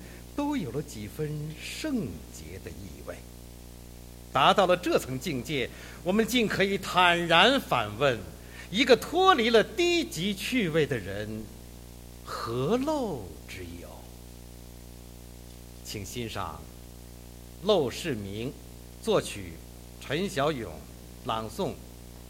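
A video or display buzz runs through the whole clip. A screen or video cable is coupling into the audio path. It adds a harsh 60 Hz buzz at the picture's field rate, with hash above it. It sits roughly 20 dB below the sound.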